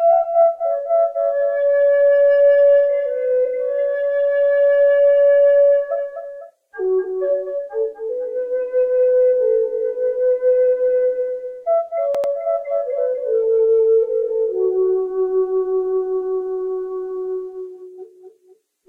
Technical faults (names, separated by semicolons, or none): repeated frames